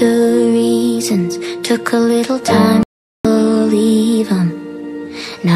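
A digital broadcast dropout mutes the sound from 2.83 to 3.25 s: the receiver lost about 0.42 s of frames, and that audio never returns.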